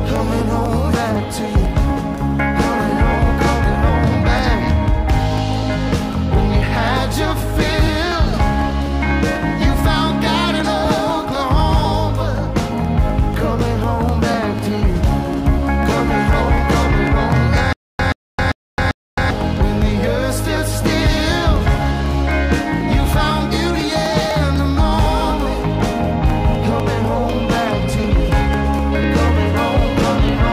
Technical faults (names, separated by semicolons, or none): periodic USB or driver dropouts; stutter with silent gaps